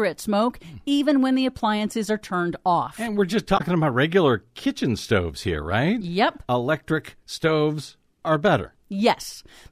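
Damaged data in a compressed stream hits this speech clip from 3.54 to 3.61 s, between "we're just" and "about regular kitchen stoves": corrupted bytes there made the decoder misread or reject frames and lose sync until it found a valid frame header.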